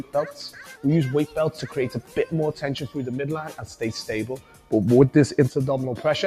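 A speech-tuned noise suppressor applied to music or sounds runs throughout, mistaking steady tones, ambience and tails for noise. Its gain swings by around 10 dB, so sustained parts sink while attacks pass, giving a pumping, thinning character. The sound cut by the noise suppressor is clearest in three dips: 1.97 to 2.17 s (about 9 dB down), 3.49 to 3.76 s (about 8 dB), and 4.37 to 4.72 s (about 10 dB). Each briefly hollows out held material and shortens its decay.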